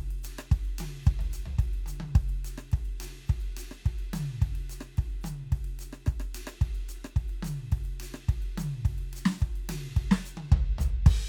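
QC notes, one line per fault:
No faults heard in this music.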